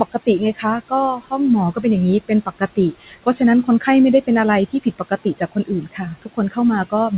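Right from the start you can hear noise suppressor artifacts. The room noise, sitting about 18 dB under the speech, gets pulled down by about 16 dB in the gaps and comes back up under the speech. Everything stops around 4 kHz, which fits a narrowband G.711-style call path.

The suppressor also mistakes parts of the speech for noise and clamps them, so soft sounds come out swallowed. This happens at 0.05 to 0.65 s, 1.16 to 1.32 s, 2.21 to 3.41 s and 4.68 to 6.58 s, with drops of about 16 to 19 dB. The last stretch is the worst, losing well over half a second of speech in total.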